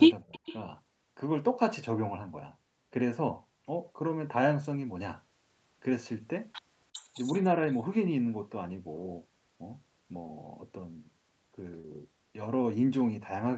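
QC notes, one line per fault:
0.23 to 0.43 s, speech suppressed in double talk: the speech dips hard, by roughly 40 dB at its deepest, with about 150 ms of it pushed down in pieces while audio from the far side overlaps it. This is likely the echo canceller failing to tell the near talker from the loudspeaker echo during simultaneous talk, so its suppressor turned everything down together. The result is a brief gap and choppy loss of level right at the start of the clip.
0.32 to 0.57 s, echo leak: a faint delayed copy of the speech comes back about 345 ms late, sitting roughly 25 dB below the direct sound. The likely cause is a loudspeaker on one end whose echo canceller left part of the microphone pickup in place, so a residue of the returned signal was sent back. It overlaps the suppression dip.
10.27 s and 11.81 to 11.86 s, short concealed packet loss: two stretches of audio, 20 ms and 40 ms, failed to reach the decoder in time. 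The receiver bridged them by extending the preceding sound, 11 ms and 31 ms of synthesised fill, before blending back into the real signal. Each gives a short smear or wobble where a brief sound can be softened or lost. The Opus path at 48 kbps with an 8 kHz ceiling is heard underneath as the usual band-limited call sound.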